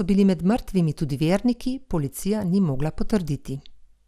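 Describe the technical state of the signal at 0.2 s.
At 0.2 s the speech sounds dull and gurgling, with a granular roughness. Nothing is heard above about 14.8 kHz. This holds for the whole clip and is most likely MP2 compression: Layer II divides the signal into 32 sub-bands and shares out a limited bit budget, so the upper bands are switched off and the remaining ones are coarsely quantised. The plainly audible damage fits a rate around 80 kbps.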